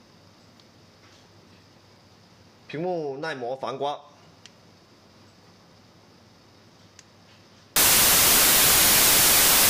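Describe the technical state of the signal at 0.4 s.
At 0.4 s the signal is intact, with no dropout, clipping, glitch or other technical fault to be heard.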